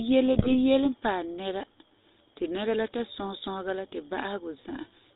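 A speech recording carried throughout by the GSM full-rate codec, with the plainly audible buzzy, gravelly roughness of that coder. Nothing comes through above 4 kHz, and the thin, rasping texture fits the 13 kbps full-rate scheme. It models the vocal tract and excites it with a sparse, regularly spaced pulse train, so the damage is a steady grit woven into the voice. That is unlike the swirly, underwater tonal artefacts of modern perceptual codecs or the fizzy hiss of low-rate ADPCM. From 0.33 to 0.55 s, GSM bit errors break through as squawks, pops and gargling. Corrupted filter, pitch and gain parameters reached the decoder, warping the spectrum or spiking the level frame by frame. The burst spans roughly a dozen 20 ms frames and points to an error rate near 2 percent. Packet-loss concealment would instead smear or repeat sound smoothly, and clipping would not bend the spectrum this way.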